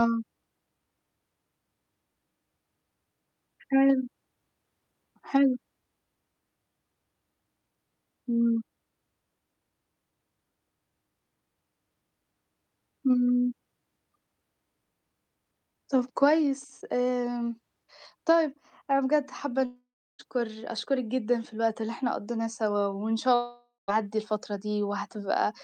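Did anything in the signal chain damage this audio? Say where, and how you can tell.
Yes, at the network stage. At 19.65–20.21 s and 23.35–23.90 s, the last sound smears into a fading buzz, falls silent for 0.35 s and then 0.17 s, and speech resumes with a piece gone. This is likely a long network dropout. Brief packet loss would be concealed without the silence.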